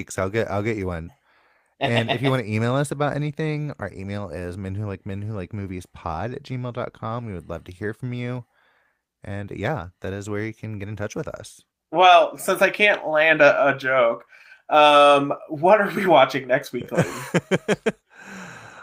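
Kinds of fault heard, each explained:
No technical faults stand out anywhere in this speech recording, so there's nothing here to list or explain.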